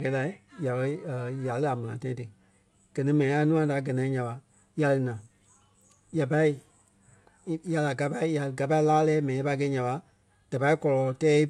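Listening to this speech recording, nothing technically wrong stood out at any point.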